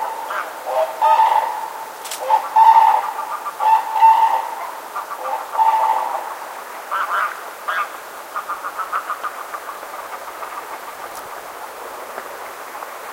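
Nothing in the audio stood out as a technical fault on listening.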